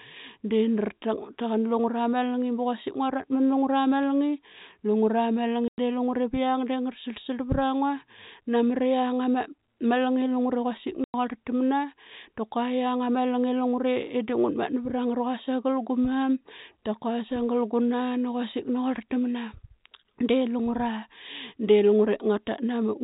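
At 5.68 and 11.04 s there's packet loss filled with silence: 100 ms holes, likely 20 ms packets dropping, with hard edges through the band-limited telephone sound.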